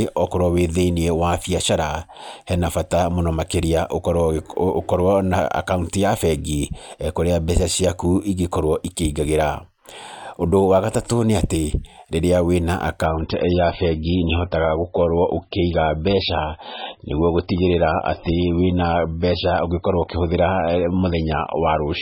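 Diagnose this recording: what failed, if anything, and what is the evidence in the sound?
An adaptive stream dropped to a lower bitrate from 13.06 s to the end. This is a network-stage fault. The speech abruptly loses everything above 5.6 kHz and turns swirly, with no gap. That fits a switch from a 128 kbit/s MP3 rendition to a 16 kbit/s one.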